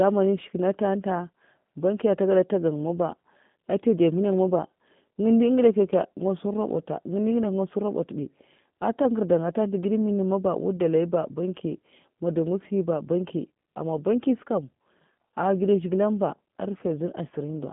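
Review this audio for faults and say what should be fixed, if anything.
G.729 codec damage runs the whole way through. The speech sounds band-limited to roughly 150 Hz to 3.5 kHz, with a rough, synthetic edge from pulse-based frame rebuilding, which fits an 8 kbit/s stream. To prevent it, capture or route the call through a wideband codec such as G.722 or Opus instead.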